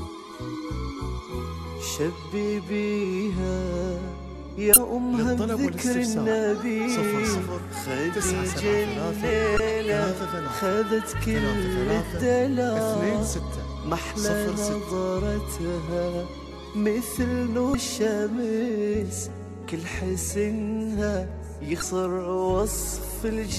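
Short bursts of damaged data in a compressed stream hit the audio at 4.73–4.77, 9.56–9.60, 17.71–17.75 and 21.79–21.82 s, each about 33 ms long, as the decoder misreads corrupted frames and resyncs. Each shows as an abrupt waveform discontinuity.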